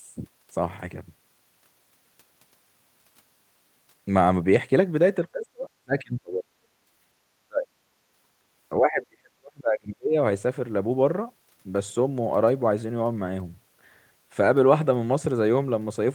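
From 5.22 to 6.45 s the speech dips, falling by about 35 dB at its deepest, for roughly a second in total. This is speech suppressed in double talk. The echo canceller likely heard both sides at once, could not tell the near talker from the loudspeaker echo, and attenuated everything. Inside that span, at 5.42 to 5.46 s, a brief scrap of the other side's voice leaks through, about 15 dB below the speech. This is most likely residual loudspeaker echo that the canceller failed to subtract from the microphone signal. The same suppression returns from 7.47 to 7.69 s as a short dip of about 35 dB lasting roughly 200 ms. It comes back again from 8.77 to 10.15 s, where the speech dips for around a second and a half, with the deepest drop near 40 dB.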